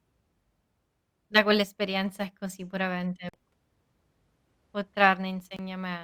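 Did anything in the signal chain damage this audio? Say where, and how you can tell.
Yes, at the wireless playback link. The speech drops out sharply at 3.29 to 3.34 s and 5.56 to 5.59 s, then resumes mid-flow, likely a Bluetooth dropout discarding late packets.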